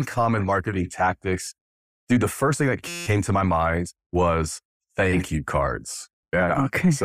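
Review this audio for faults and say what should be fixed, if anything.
A system hang loop runs from 2.88 to 3.07 s, between "the first thing that" and "to my mind was". A 5.8 ms slice repeats exactly as a steady 172 Hz buzz, which fits a stalled driver replaying a 256-sample ring buffer. The waveform shows identical repeating cycles, and the spectrogram shows horizontal lines at multiples of 172 Hz. Have the driver detect stalls and output silence rather than recycle the buffer.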